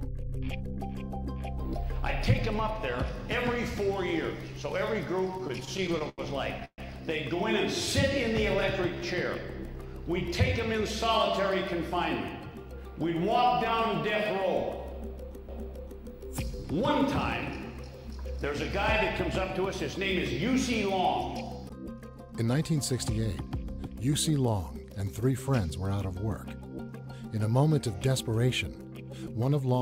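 From 5.31 to 6.80 s repeated stalls (stutter) appear: the jitter buffer ran dry sixteen times, with held or faded sound filling 366 ms, the longest stall 132 ms, so the audio drags without losing content. From 11.09 to 12.73 s a jitter buffer speed-up trims short pitch-period pieces to shrink excess buffering, playing at 105% speed, same pitch, shedding about 70 ms. CD skips at 15.48 s and 21.69 s each produce a tick and a mute of a few milliseconds as the laser jumps tracks, and playback resumes from a different point. A second jitter buffer speed-up from 22.40 to 23.97 s again runs at 105% speed, removing about 100 ms and sounding hurried.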